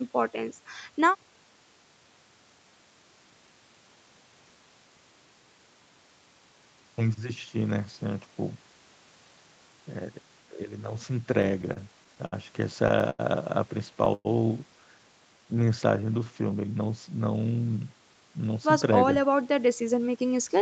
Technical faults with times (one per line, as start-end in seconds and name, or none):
11.31-13.21 repeated stalls (stutter)
14.14-14.27 call audio freeze
15.27-16.31 jitter buffer slow-down
18.07-20.57 jitter buffer speed-up